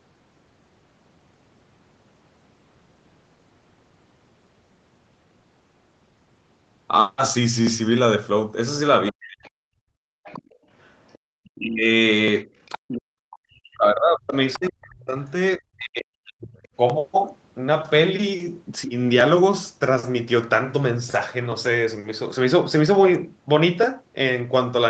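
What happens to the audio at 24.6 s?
Nothing goes wrong at 24.6 s: the speech carries on intact through that moment, with the band-limited sound of the call path, which has nothing above 8 kHz.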